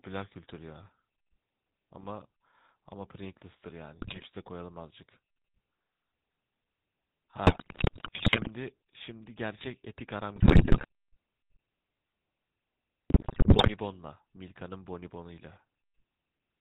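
Speech heard through the GSM full-rate codec. Nothing passes above 4 kHz, and the codec's coarse pulse excitation leaves a plainly audible buzzy, gravelly roughness. GSM bit errors break the sound into squawks and gargling at 4.02–4.26 s, 7.46–8.48 s, 10.36–10.85 s and 13.1–13.7 s. Corrupted filter, pitch and gain values distort each damaged frame.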